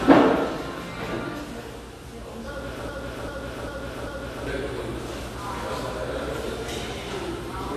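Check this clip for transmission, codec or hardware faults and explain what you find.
Two faults are audible: codec damage across the whole clip and a stuck repeating section near the middle.

AAC compression runs throughout. The sound is dull and smeared, with a fizzy, warbling texture. The likely cause is AAC-LC at a low bitrate, which fits about 32 kbps, where the encoder drops fine spectral detail. A spectrogram shows nothing above 13 kHz and patchy holes below that cut-off.

A broken-record loop runs from 2.89 s to 4.47 s. A 395 ms fragment plays four times back to back, and the audio that belonged in that span is lost. A stalled player or stream resending its last buffered piece is the likely cause. The waveform shows identical blocks repeating at a fixed spacing.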